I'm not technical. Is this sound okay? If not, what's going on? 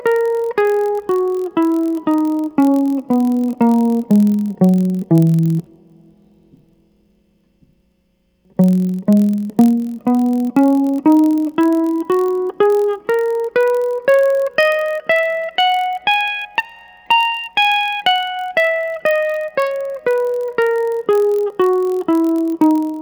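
No. All the way through this music there's a low buzz, about 43 times a second. That's a block size mismatch (padded): one stage hands over slightly short chunks, and tiny silent gaps fill the rest, which fits 1024-sample blocks. It plays a hair slower, barely noticeable.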